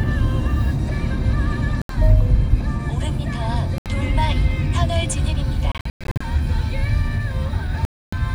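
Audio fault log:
1.82–1.97 s, 3.78–3.90 s, 5.72–6.25 s, 7.85–8.13 s: Bluetooth dropouts. Sharp-edged silences, with sound resuming further along, likely from late packets being discarded. The 5.72 s event is broken gaps, the longest lasting 0.11 s.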